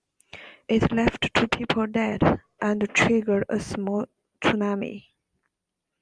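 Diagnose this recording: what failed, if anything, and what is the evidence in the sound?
Nothing stood out on listening to this speech recording that would point to a failure at any stage of the chain.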